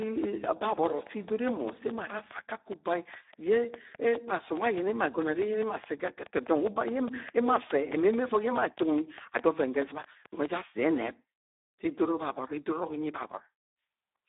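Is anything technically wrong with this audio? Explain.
Yes, there are two problems. The Speex codec damage runs through the whole clip. The speech is heavily degraded in the way that fits a low setting of around 8 kbps. With so few bits for the excitation signal, the CELP coder rebuilds the voice coarsely, leaving it hoarse, noisy and edging toward robotic. The audio is also squeezed into a telephone-style band of about 300 Hz to 3.7 kHz, with nothing at all above 3.8 kHz, so it sounds thin and muffled.

A train of clicks runs from 0.02 s to 10.46 s. Near-identical pulses arrive at a steady 4.79 per second, around fifty in all, and they stand out sharply, far louder than the speech. They tick over the talking and through the pauses alike, at an even rhythm, then stop well before the end. The likely source is electrical interference from nearby equipment or a faulty connection or power supply injecting a repeated pulse.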